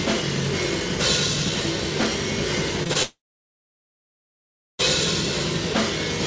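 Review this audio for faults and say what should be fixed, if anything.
Short concealed packet loss: three packets of about 20 ms each missed the decoder, at 2.83 to 2.87 s, 2.87 to 2.91 s and 2.93 to 2.97 s. The receiver extended the preceding sound to cover each gap, so this stretch smears and wobbles briefly before the real audio resumes.

Long network dropout: from 3.03 to 4.81 s, about 1.76 s of audio likely never arrived over the network. The last sound is carried on briefly, then fades into roughly 1.6 s of silence. When the audio returns, nothing from the gap is played. The loss is heard through the G.722 call path, which carries nothing above 8 kHz.

To prevent this, stabilise the network link and enable forward error correction or redundancy, so that short losses are recovered instead of concealed.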